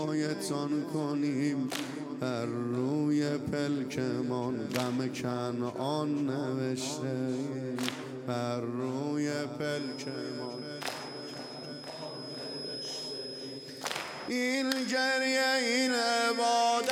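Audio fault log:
9.64–16.92 s: feedback whistle. A thin, steady 5.1 kHz tone sits around 10 dB below the sound through to the end, swelling and fading slowly in level. The likely cause is a loudspeaker-to-microphone loop held just at the edge of feedback without running away.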